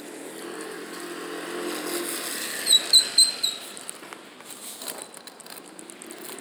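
No technical faults are audible anywhere in this audio.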